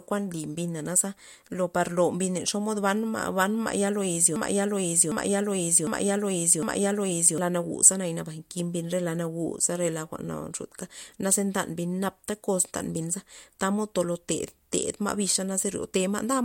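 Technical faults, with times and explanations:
4.36–7.38 s, broken-record loop: the same 0.75 s piece of speech plays four times back to back, identical on each pass, and the speech that belonged in those three seconds is lost. The player or stream likely stalled and kept resending its last held fragment.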